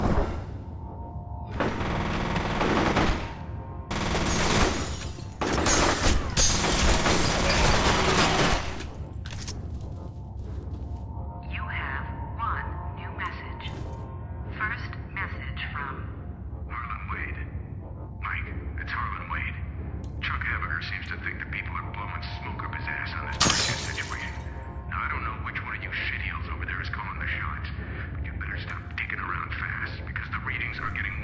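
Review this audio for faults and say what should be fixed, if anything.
Nothing stood out on listening, so there is nothing here that needs fixing.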